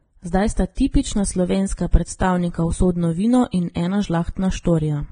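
Vorbis compression runs throughout: the speech stops at 9.7 kHz, and coarsely quantised treble becomes grainy hiss, likely from heavy low-bitrate Vorbis encoding around 22 kbps.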